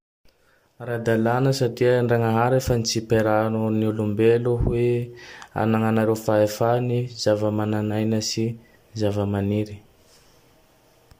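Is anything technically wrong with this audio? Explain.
No, nothing technically wrong turns up anywhere in this speech recording, so there's nothing to flag here.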